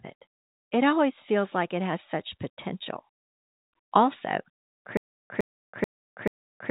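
From 4.97 s to the end, a stutter with silent gaps: a 106 ms burst repeats four times, every 434 ms, with 328 ms of digital silence between. This likely comes from a stalled stream replaying its last fragment. On the waveform it appears as identical blocks separated by flat lines, above a band-limited telephone spectrum that stops near 3.8 kHz.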